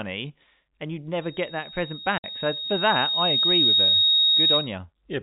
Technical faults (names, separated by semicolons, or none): loudspeaker feedback squeal; packet loss filled with silence